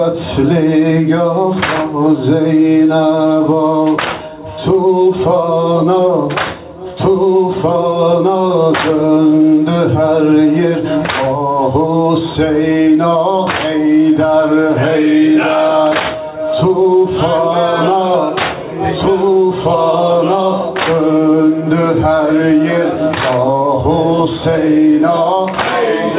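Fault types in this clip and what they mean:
Gain pumping: throughout, the gain swings by around 10 dB, squashing loud and soft parts together, likely from excessive input gain feeding a fast limiter.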